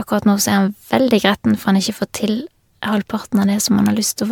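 Throughout the speech, the sound is swirly, smeared and hollow, with blurred consonant attacks and nothing above about 19.9 kHz. That points to generation loss, likely from about seven rounds of MP3 encoding near 140 kbit/s, each requantising on a shifted frame grid.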